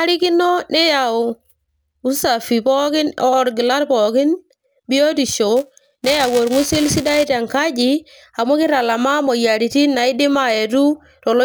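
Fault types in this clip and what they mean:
Buffer tearing: writer and playback hardware slipped out of step, so each buffer holds a sliver of audio about 10 ms stale, producing a robotic 345 Hz buzz.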